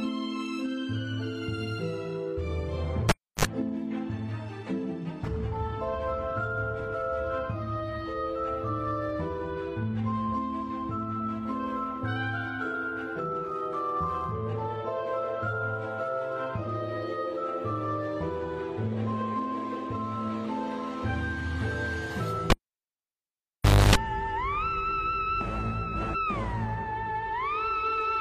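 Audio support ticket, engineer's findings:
Cable pulled and plugged in, 3.09 to 3.45 s: live connector withdrawn and reinserted. Pop on break, about 0.31 s near silence, then 55 ms of 50 Hz mains buzz while only the tip makes contact, second pop as the signal returns.

Cable pulled and plugged in, 22.5 to 23.95 s: same connector fault, longer disconnect. Pop, about 1.4 s near silence, 0.28 s of 50 Hz buzz during partial contact, pop on full reseat.

Damaged data in the compressed stream, 16.63 to 16.67 s: corrupt bytes in the encoded frames. The decoder misreads them, loses sync and hunts for the next frame header. Heard as a 44 ms blip.

Damaged data in the compressed stream, 26.10 to 26.16 s: same decoder resync after corrupt frames. A 56 ms glitch. Check the file or stream source and the transport for dropped or overwritten bytes.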